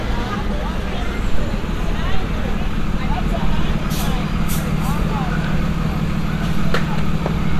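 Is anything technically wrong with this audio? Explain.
No, there's nothing technically wrong here that I can hear; the everyday sounds come through without any audible fault.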